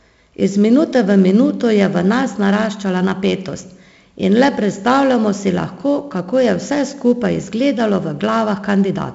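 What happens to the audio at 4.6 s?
At 4.6 s you're hearing the 4-bit ADPCM compression that runs through the whole clip: coarse predicted steps leave gritty hiss riding the speech, and nothing above 7.7 kHz.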